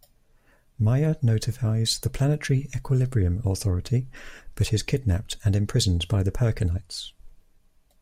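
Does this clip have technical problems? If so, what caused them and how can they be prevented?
No, no technical faults are audible.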